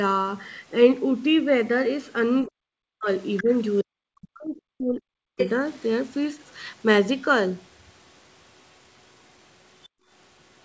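From 2.45 to 3.08 s the speech sinks by roughly 40 dB, most likely speech suppressed in double talk. With both ends talking, the echo canceller could not separate the talker from loudspeaker echo and pulled the whole signal down. Two more episodes follow: a shallow dip of about 10 dB at 3.43 to 3.49 s, and a long, deep one of about 40 dB from 3.83 to 5.40 s. What separates this from background gating is that the talker's own speech is being cut, and it happens while the far side is active.

Between these dips, at 3.37 to 3.42 s, a brief scrap of a second voice appears, likely the other side's voice leaking through. The loudspeaker playback reached the microphone and was not fully cancelled. It sits about 15 dB under the speech. A louder leak, only about 5 dB below the speech, comes at 5.38 to 5.49 s as the long suppression releases. A faint one, about 30 dB down, comes at 9.83 to 9.88 s. 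Unlike the suppression faults, which take sound away, these add a second voice on top.

Right after that last leak, from 9.88 to 10.1 s, the room tone drops out by about 38 dB and then returns. This is background gated by the echo canceller, likely because it clamped the microphone while the loudspeaker played. The sign that it is gating is that the drop hits the ambient room sound in a gap, not the talker's speech.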